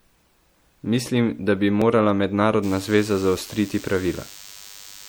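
From the first moment the speech has a watery, swirly quality, with a dulled top end and smeared consonant attacks. The damage is plainly audible. This is likely MP3 compression, at a rate that fits about 64 kbps. With so few bits, the encoder cuts the treble at a fixed point and drops weaker frequency detail, which flickers in and out from frame to frame and produces that swirl.

At 1.82 s there is a single skip where a very short piece of audio vanishes and the two sides butt together with no silence between them. The likely cause is audio missing between chunks: the recorder or processor loses a brief stretch while it closes one block and opens the next, and the timing fits 2-second chunks.

From 2.63 s to the end a thin, steady buzz sits under the speech. It is rich in harmonics and stays well below the speech level. This is DECT cordless phone buzz. A nearby DECT handset or base sends a radio burst every 10 ms, the audio circuitry rectifies it, and the result is a 100 Hz tone with many overtones.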